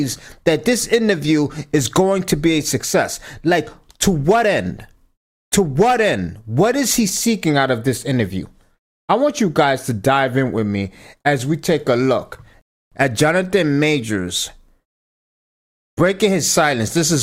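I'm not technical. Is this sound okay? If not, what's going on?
No. At 12.61 s the speech halts in silence until 12.92 s, a rebuffering stall: playback waited for data, then resumed exactly where it stopped, so nothing is skipped.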